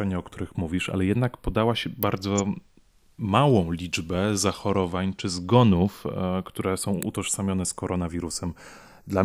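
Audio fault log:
throughout, channels drifting apart: the two channels run on slightly mismatched clocks, around 30 ppm apart, so their offset creeps to a fraction of a millisecond. Mixed to mono, this gives a slow flanging sweep rather than a fixed comb tone.
2.03 s and 7.03 s, electrical switching spike: sharp snaps just after "ale jednak podała się" and "czy zgonów które są", likely arcs from nearby switching. They sit on top of the speech instead of cutting it out, unlike dropouts.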